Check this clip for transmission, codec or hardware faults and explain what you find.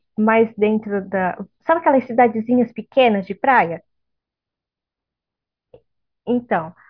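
Nothing in this speech recording points to a transmission, codec or hardware fault. The signal holds steady throughout, with no interruptions or disturbances to report.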